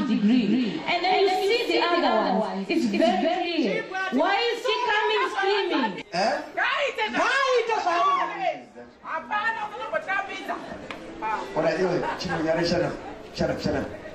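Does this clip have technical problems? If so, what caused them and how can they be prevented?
Yes. A doubled audio track is already running when the clip begins and continues to 3.46 s, where the second copy cuts off abruptly. A full-band repeat of the sound trails around 200 ms behind the original, roughly 5 dB quieter, with no decay or room colour, so it reads as a dry, detached echo. The likely cause is the same signal being captured twice, once through a slower path. To prevent it, route each source through a single capture path and monitor for duplicate inputs before recording.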